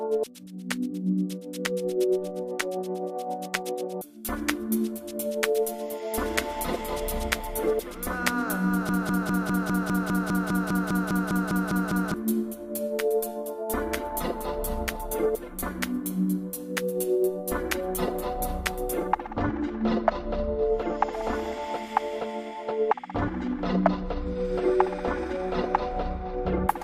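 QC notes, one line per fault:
8.89–12.14 s, broken-record loop: the player, encoder or stream likely stalled and kept resending the last fragment it held, so a 0.2 s piece of sound repeats exactly, back to back, 16 times, and whatever should have played there is lost.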